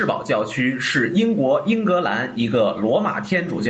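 A microphone gain set far too high, with a fast limiter or compressor clamping down on every loud syllable, is the likely cause of the gain pumping that runs through this short speech clip. The level swings by around 10 dB, pulling loud and soft passages toward the same level. The speech sounds squashed, over a call path whose top end stops at 8 kHz.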